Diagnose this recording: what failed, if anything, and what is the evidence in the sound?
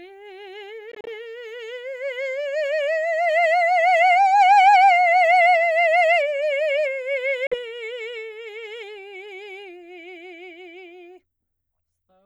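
At playback, the music has short silent holes, likely a Bluetooth dropout: between 0.92 and 1.09 s several gaps totalling about 76 ms, the longest about 30 ms, and about 46 ms lost around 7.47 s. Unlike a buffer underrun, the music resumes as if it had played on.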